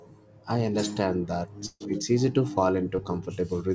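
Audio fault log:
1.66–1.82 s, burst of packet loss: A run of audio went missing here, about 140 ms of it. The receiver covered the hole by extending the last sound for about 143 ms and letting it die away, so it comes out as a held buzz or fading hiss. About 30 ms of near silence follows. The sound then picks up further along, with the missing stretch simply skipped over.
2.96–3.00 s, short concealed packet loss: A much smaller gap, about 20 ms of audio, arrived too late to play. The receiver filled about 15 ms by carrying the preceding sound forward, then blended back into the real signal. What you hear is a brief smear or wobble rather than a dropout. The concealment is short enough that the break passes quickly, while the call path passes nothing above 8 kHz across both events.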